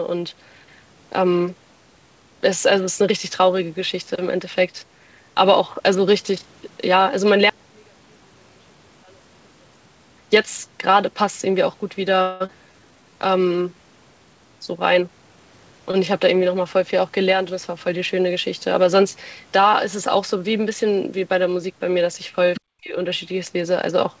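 From 7.50 to 10.18 s, one stereo channel likely has inverted polarity, so the two channels work against each other when summed. In a mono fold-down the speech, which sits equally in both channels, largely cancels and drops by about 36 dB. What remains for that stretch is a faint residue of the difference between the channels, and the voice is nearly gone until the polarity match returns at 10.18 s.

At 12.22 s a long network dropout likely begins: packets stopped arriving, and the receiver filled roughly 264 ms by extending the last sound until 12.50 s. That fill is heard as a fading buzzy continuation rather than silence. When the audio resumes, about 160 ms of speech is simply absent, so the speech jumps forward. The delay also shifts by around 40 ms across the gap.

From 12.67 to 13.75 s the jitter buffer slow-down follows as the receiver rebuilds its reserve. It repeats individual pitch periods and slivers of pauses to add 141 ms. 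The speech plays at 88% speed with unchanged pitch, so syllables sound drawn out and slightly sluggish.

Between 14.80 and 15.80 s the opposite happens, a jitter buffer speed-up. The buffer is holding more than its target, so the receiver cuts short pieces of one or a few pitch periods, removing about 150 ms in total. Speech runs at 114% speed at the same pitch, sounding rushed and slightly clipped in its rhythm.

Right after, from 15.91 to 15.95 s, there is a short stall from a late packet. The buffer ran dry for a moment, so the receiver held the current sound for 22 ms until the packet came in, then carried on where it left off. Nothing is lost, but a sound hangs a touch too long, with a slight buzz or dip and a 22 ms added delay.

From 22.55 to 22.61 s the other side's voice leaks through. The device is likely playing the far end on a loudspeaker and the echo canceller fails to remove all of it from the microphone signal. 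A scrap of a second voice is heard for about 60 ms, roughly 15 dB below the main speech.

From 22.80 to 22.96 s there is speech suppressed in double talk: with both ends talking, the echo canceller likely could not separate the near voice from the loudspeaker echo and clamped down on both. For about 150 ms the talker's speech dips sharply, by as much as around 30 dB at its deepest, before the level recovers. Throughout, the G.722 call path caps the audio at 8 kHz.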